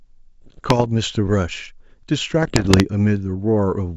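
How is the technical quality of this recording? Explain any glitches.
The speech comes through a G.722 wideband path, clean up to about 7 kHz, but two rough patches break it up. From 0.42 to 0.88 s and 2.43 to 2.83 s you get bit errors on an ADPCM link. Flipped bits throw the decoder's step size and predictor off, so you hear pops, gritty bursts and jumpy level.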